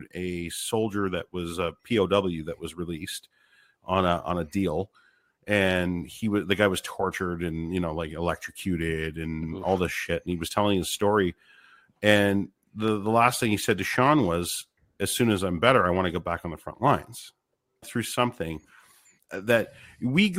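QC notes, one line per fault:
12.88 s, dropped samples: right before "the last thing he" there's one sharp click. The waveform jumps straight to a later value, likely because a fraction of a millisecond of samples went missing. That's far too little to lose any sound, so all you hear is the tick.
17.82 s, stream segment skipped: just after "on the front lines" the audio lurches forward with a small blip. Likely one chunk of the segmented stream failed to load and the player went straight on to the next, so a stretch of the programme is missing at the join.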